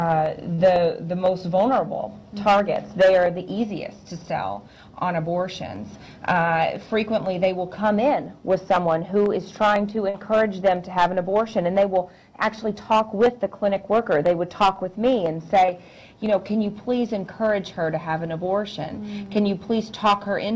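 Hard clipping runs through the whole clip. The signal was pushed about 5 dB past what one stage in the chain could carry, so around two percent of samples hit the ceiling and had their peaks sliced flat. Those squared-off tops add harmonics high in the spectrum, heard as a crackly roughness on the loudest moments. Above 8 kHz there is no content, which fits a G.722 call path at 64 kbps.

Short concealed packet loss occurs at 0.54 s, 10.10 s and 15.66 s. The first two gaps are about 40 ms and the third about 20 ms: audio that did not reach the decoder in time. The receiver covered each hole by extending the preceding sound, then crossfaded back into the real signal. Each one comes across as a brief smear or wobble rather than a silent dropout.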